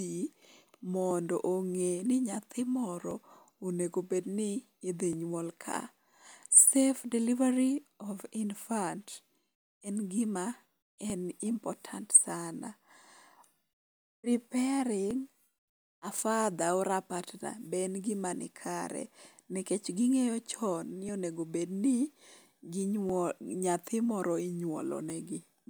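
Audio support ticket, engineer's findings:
Periodic USB or driver dropouts, 1.11 to 25.1 s, every 2.0 s. Ticks in the speech where the USB bus or audio driver stalls and a couple of milliseconds of audio are skipped.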